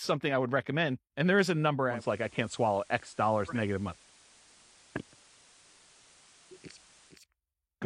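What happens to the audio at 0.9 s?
At 0.9 s the speech carries on intact, with no dropout, click, distortion or other fault at that point.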